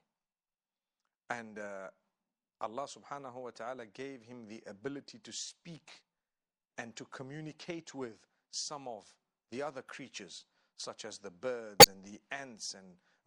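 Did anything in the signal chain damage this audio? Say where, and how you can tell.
Yes. Throughout the speech there is plainly audible codec damage: the sibilants turn metallic and chirpy, and the sound has a watery, swirling quality as weak spectral detail flickers in and out from frame to frame. The cause is likely MP3 compression starved of bits, which fits a 64 kbps encode. A fixed band-limit combined with frame-rate swirl is what separates it from a simple low-pass filter or noise reduction.

There are also two corrupt frames decoded in the codec stage, at 7.91 to 7.93 s and 11.80 to 11.85 s. Each is a short burst of misplaced energy about one frame long. The first is faint, peaking at about −55 dBFS, and the second is a loud squeak or blip at about −10 dBFS. Flipped bits made the decoder apply wrong gains or codes for one frame. Unlike a dropout or a click, these bursts carry energy at the wrong frequencies rather than silence or a single sharp edge.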